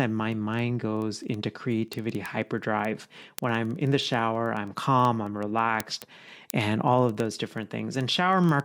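From 0.11 s to 8.60 s the speech carries word clock ticks: a receiving device running on its own clock, off from the sender's by roughly 400 parts per million, drops or repeats a single sample each time the two clocks slip. That gives sharp ticks about every twentieth of a second, around 150 in all, of uneven strength. On a spectrogram they appear as evenly spaced thin vertical lines through all frequencies; a zoomed waveform shows a one-sample step at each.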